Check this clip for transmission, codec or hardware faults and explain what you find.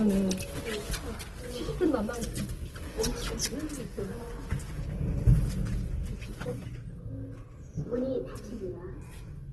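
One codec fault runs through the whole clip: Opus compression. For the full duration the audio sounds grainy and rough, with tonal parts turning noisy rather than clean, and nothing is present above 12.1 kHz. The cause is likely an Opus encoder in its CELT music mode running short of bits, consistent with a rate around 16 kbps. It preserves each band's energy but fills starved bands with folded or noise content, giving texture damage instead of swirling holes.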